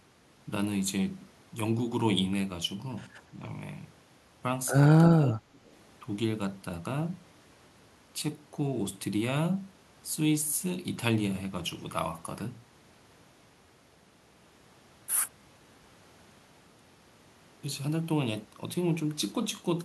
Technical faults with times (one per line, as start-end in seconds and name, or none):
5.04-5.51 speech suppressed in double talk
5.56-5.70 echo leak